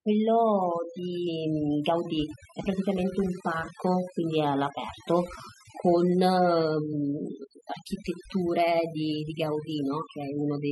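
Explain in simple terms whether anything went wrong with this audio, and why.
Yes, something went wrong: the speech has overdone noise removal from start to finish. A cleanup tool was pushed too hard, so it switches off individual slices of the sound whenever they resemble background hiss, taking the softer parts of the voice with them. The pauses sit in near silence sprinkled with twinkling specks. A simple noise gate would silence the gaps cleanly, without that sparkle.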